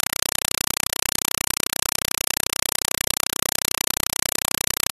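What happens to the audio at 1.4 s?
At 1.4 s, as throughout, the speech is replaced by loud chattering static: a compressed stream played as audio. Undecoded AC-3 frames arrive as 4 ms noise bursts, each followed by silent padding, 31.25 times a second. That steady rhythm of gaps distinguishes it from ordinary broadband noise.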